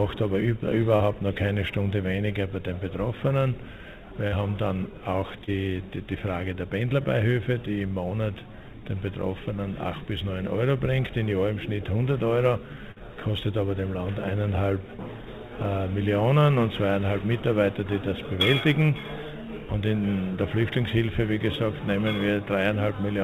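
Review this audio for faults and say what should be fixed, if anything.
Sample clock jitter runs throughout: a faint hiss and roughness, roughly 35 dB below the signal, rises on loud and bright passages and drops away in quiet ones. This fits timing errors of a few microseconds at the converter, where the error grows with waveform slope. Prevent it by clocking the converter from a stable, low-jitter reference.

Short concealed packet loss occurs at 0.96 to 1.03 s and 5.44 to 5.50 s. About 40 ms of audio failed to arrive each time. The receiver extended the preceding sound for 35 ms and 33 ms, then crossfaded back, leaving a brief smear. Prevent it with a steadier network path or forward error correction on the stream.

Burst of packet loss occurs at 4.28 to 4.35 s and 12.91 to 12.99 s. Concealment carried the last sound forward for 45 ms and 47 ms while fading it, giving a held buzz or decaying hiss. 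Playback then resumed with about 40 ms absent. Prevent it with a larger jitter buffer, redundancy, or a less congested link.

The call path's 4 kHz upper limit is as expected for a narrowband mu-law stream.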